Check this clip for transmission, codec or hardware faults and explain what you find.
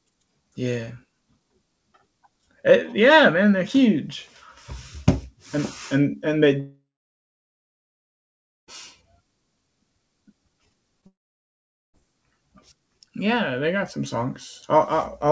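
The clip has three transmission faults of two kinds: long network dropouts and a short concealed packet loss. The band ends at 8 kHz throughout, as expected from a wideband call codec such as G.722.

Long network dropout, 6.60 to 8.69 s, right after "and and and they", and again from 11.06 to 12.02 s. About 2.1 s and 0.88 s of audio never arrived. The likely cause is a network stall: the receiver extends the last sound as a fading buzz, then leaves near-silence for roughly 1.8 s and 0.8 s before speech resumes, with the lost part gone. A spectrogram shows a smeared tail fading into a blank gap, and the waveform flattens to nearly zero.

Short concealed packet loss, 11.01 to 11.04 s. About 20 ms failed to reach the decoder, and the receiver bridged the gap by continuing the preceding sound before blending back. It is heard as a brief smear or wobble. On a spectrogram it appears as a tiny stretch of blurred continuation of the preceding sound.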